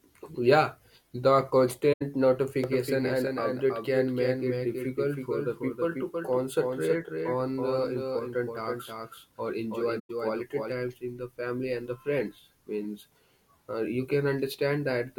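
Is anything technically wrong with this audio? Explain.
Yes. The speech has two kinds of fault.

From 1.93 to 2.02 s and again from 9.99 to 10.10 s there is AAC frame loss with muting. The gaps last about 85 ms and 107 ms, which fits four and five lost AAC frames. The decoder replaced their spectrum with silence, and the overlapping transform windows taper the sound out and back in. The result is a soft-edged hole. That smooth fade separates it from a hard dropout, where the sound is cut abruptly and often snaps.

From 2.64 to 10.72 s, just before "in the family and", there is a doubled audio track. A second full-band copy of the speech trails the original by roughly a third of a second, about 5 dB quieter. It is likely a second, slower capture path mixed in with the first. The copy starts and stops abruptly and has no decay or room colouring. That separates it from reverberation or a natural echo, which would fade away and sound like a space.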